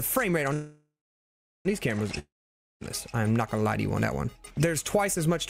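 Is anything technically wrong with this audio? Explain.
Yes, there are two separate interruptions.

From 0.53 to 1.67 s there is a call audio freeze, likely caused by packets stalling in transit until the jitter buffer ran dry. The receiver stretches the last sound into a fading buzz that gives way to about 0.78 s of silence. When the packets arrive, the audio resumes exactly where it stopped, so nothing is lost. Everything after that point plays about 1.1 s later than it should.

From 2.19 to 2.83 s there is a long network dropout, likely a stretch where no packets reached the receiver at all. Again the last sound fades into a brief hiss, followed by about 0.53 s of silence. This time the audio returns further along, so about 0.62 s of the original material is simply gone and the sound jumps forward when playback resumes.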